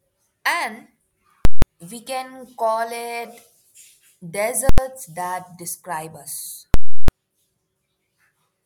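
At 1.45–1.62 s, 4.69–4.78 s and 6.74–7.08 s, invalid numbers at full scale: a calculation produced infinite values that pinned the output, giving loud pops around silent gaps.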